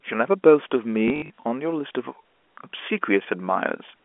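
From 1.08 to 1.44 s, packet loss with last packet repeated: 160 ms of gaps, runs up to 60 ms, refilled with repeats, stuttering robotically.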